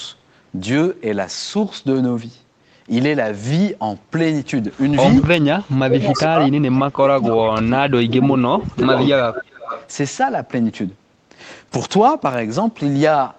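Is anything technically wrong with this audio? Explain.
Yes. Two kinds of fault occur.

Echo leak appears at 4.73 to 5.25 s, 6.04 to 7.43 s and 8.31 to 9.89 s. A delayed copy of the speech returns 336, 345 and 357 ms late. It starts faint, about 25 dB down, and grows almost as loud as the speech. The likely cause is a loudspeaker at the far end whose echo canceller let its microphone pickup back into the call.

Speech suppressed in double talk runs from 5.47 to 9.54 s, overlapping the echo. The speech dips and cuts out in pieces for around three seconds in total, falling by up to about 35 dB. The echo canceller likely could not separate the talker from the echo and turned both down.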